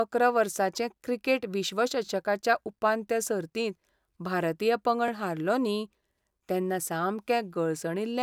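At 2.06 to 2.08 s and 5.08 to 5.10 s, overlapping chunks cause stutters. Each 3 s chunk starts early, replaying 20 ms of speech.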